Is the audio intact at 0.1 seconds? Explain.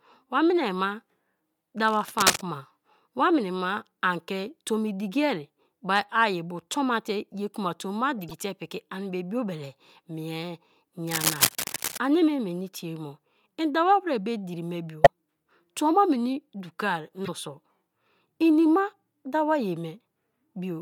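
Yes, the speech at 0.1 seconds plays cleanly, with no dropout, click or other disruption to be heard at that moment.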